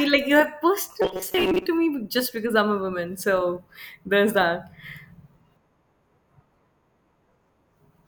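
From 1.02 to 1.66 s the speech turns into a rigid, metallic buzz pitched at 188 Hz, loosely tracking the words. This is robotic sound from repeated short buffers, likely caused by audio arriving too late, so a roughly 5 ms slice was looped over most of that stretch.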